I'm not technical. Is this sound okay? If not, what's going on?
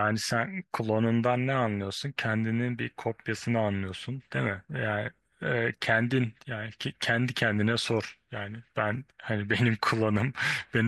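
Yes, nothing here sounds wrong.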